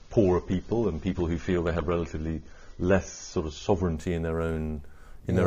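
The audio opens on an adaptive stream starting at a low bitrate: until 3.97 s nothing sounds above 6.9 kHz, with smeary codec artefacts fitting a low-bitrate AAC version. A spectrogram shows a flat ceiling there, then content suddenly filling upward, with no gap in the waveform.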